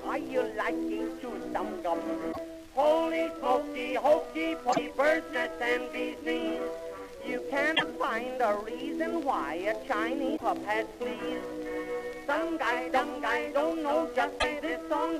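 Damaged data in the compressed stream makes the decoder misread frames and lose sync until it finds the next valid header. Each time, a brief glitch of about 90 ms cuts through the sound at 2.29–2.38, 4.69–4.79, 7.72–7.82, 10.33–10.42 and 14.36–14.44 s.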